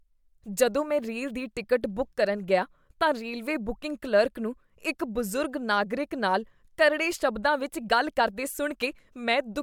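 Speech recording; no technical faults can be heard.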